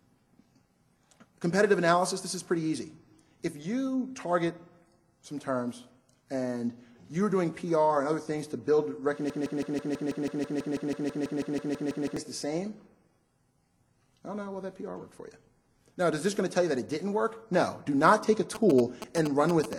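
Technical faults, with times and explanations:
9.30 to 12.17 s, broken-record loop: a fragment of about 163 ms repeats exactly, back to back, 18 times, and whatever should have played in those three seconds is gone. This is likely a stalled player or stream resending the last buffer it held.
18.55 to 19.74 s, GSM signalling bursts: galloping groups of short buzzes at about 217 Hz, fairly strong at roughly 5 dB below the programme level. A nearby 2G phone signalling on the network produces radio bursts that the audio circuitry rectifies into audible pulses.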